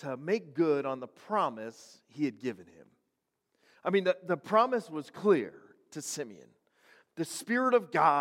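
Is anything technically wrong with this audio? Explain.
No, nothing stood out as technically wrong on listening to this speech.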